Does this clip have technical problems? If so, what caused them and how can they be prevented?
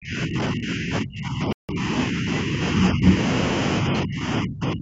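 Yes. The speech is repeatedly pushed down, most likely speech suppressed in double talk: when both ends spoke at once, the echo canceller could not tell its own talker from the returning loudspeaker echo, so it attenuated everything. From 0.0 to 3.15 s the speech dips in and out, about two seconds of it affected, sinking by around 20 dB at worst. From 3.82 to 4.81 s it drops again for roughly 0.7 s, this time as deep as about 35 dB. Using a headset instead of an open loudspeaker reduces the echo that triggers this suppression.

Inside the first dip, from 1.53 to 1.69 s, the sound cuts to complete silence for 0.16 s and then resumes. This is a Bluetooth stall, likely caused by radio interference delaying packets until the headphones' buffer emptied, so playback halted until retransmitted audio arrived. Keeping the phone close to the headphones, with no obstructions and away from crowded 2.4 GHz sources, helps prevent this.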